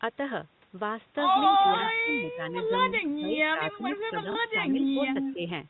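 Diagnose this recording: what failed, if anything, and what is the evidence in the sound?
Echo leak at 1.47–1.59, 3.04–3.09, 3.67–3.75 and 4.69–5.34 s, in call processing: a copy of the speech returns 250 ms late, from faint to nearly speech level in the last stretch. The far end's echo canceller likely let loudspeaker pickup through to its microphone.

Speech suppressed in double talk at 1.61–2.53, 2.93–4.96 and 5.34–5.44 s, also call processing: the talker's level sags in patches, by up to about 20 dB. The canceller likely could not separate the local talker from the returning echo, so it ducked both.

Packet loss with last packet repeated at 4.32–4.35 s, on the network: a 30 ms gap, which fits a single lost packet, is filled by replaying the previous audio. The single repeat is heard as a small blip.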